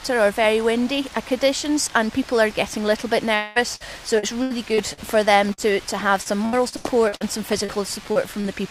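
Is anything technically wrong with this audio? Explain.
Yes, the audio has several network faults, clustered from about 3.35 s to 8.47 s.

Long network dropout, 3.35 to 3.58 s: roughly 200 ms of audio likely never arrived in time. The receiver stretched the last sound across the gap for about 201 ms, so it becomes a drawn-out, fading buzz or hiss with no true silence, and the audio resumes past the lost part.

Burst of packet loss, 3.75 to 3.83 s: about 40 ms went missing in one run. The decoder continued the preceding sound for about 48 ms, turning it down as it went, and cut roughly 14 ms when rejoining, so a brief held buzz or fading hiss gives way to sound that jumps ahead.

Repeated packet loss (robotic sound), 4.19 to 5.00 s and 6.22 to 7.24 s: losses kept recurring, with four gaps in the first stretch and six in the second, the longest about 77 ms and 81 ms. About 23% and 31% of each span is patched-in continuation, giving choppy sound with pieces missing.

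Short concealed packet loss at 5.53, 7.65, 8.12 and 8.41 s: about 40 ms each time failed to reach the decoder. It filled each hole with 33 to 43 ms of extrapolated sound and blended back, heard as a quick smear or wobble. At 8.12 s the fill added around 10 ms, slightly drawing out the timing.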